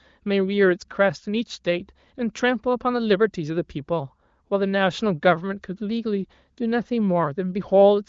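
No faults are audible; the speech shows the expected wideband AMR (HD Voice) band limit, with nothing above about 7.5 kHz and codec artefacts faint at most, which fits the codec's high rate of 23.05 kbit/s.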